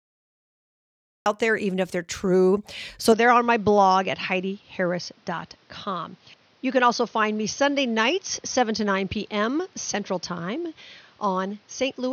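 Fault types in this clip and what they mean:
Cut-off start: the recording begins late, dropping in abruptly from digital silence at 1.26 s mid-sound, just before "there even if they're", with no natural attack.
Input switched to a poorer device: from 3.12 s the speech turns duller, nothing above 6.5 kHz, about 5 dB quieter, new background noise added, likely a microphone change.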